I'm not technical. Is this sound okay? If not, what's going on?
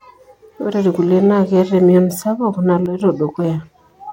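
No. At 2.86 seconds there's a sudden gain jump. The speech and background suddenly drop quieter until 3.0 seconds, likely from a volume setting changed abruptly.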